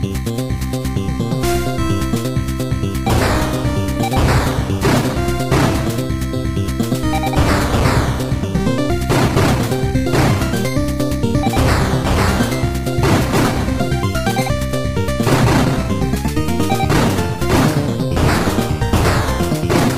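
No technical faults can be heard anywhere in this audio, so there is nothing to place in time order.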